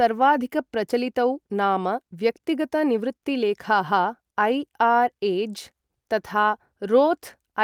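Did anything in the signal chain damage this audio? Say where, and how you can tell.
No, nothing in the signal chain audibly damaged this speech recording. Listening across the whole clip, no stage leaves a mark that points to trouble anywhere in the chain.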